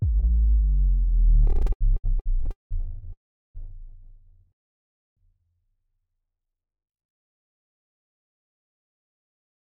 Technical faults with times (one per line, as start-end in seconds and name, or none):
1.47-2.73 repeated stalls (stutter)
3.13-3.57 call audio freeze
4.52-5.19 call audio freeze
6.45-8.38 jitter buffer slow-down